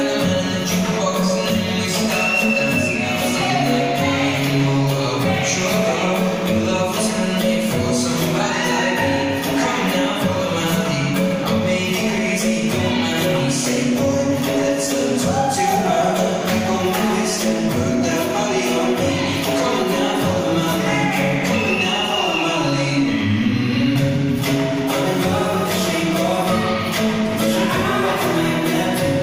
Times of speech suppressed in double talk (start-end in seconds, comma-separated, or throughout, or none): none